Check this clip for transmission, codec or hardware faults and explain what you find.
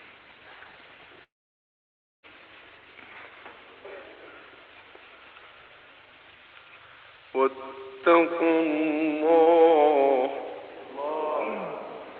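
One transmission fault is audible, a gap of about one second early in the clip.

From 1.23 to 2.26 s, the sound trails off into a brief fading buzz and then nearly a full second of silence before resuming with that stretch missing. This is likely a long network dropout: no packets arrived, so the receiver's concealment extended the last sound briefly and then fell silent. The audio that follows stays limited to about 8 kHz, as expected from the Opus call path.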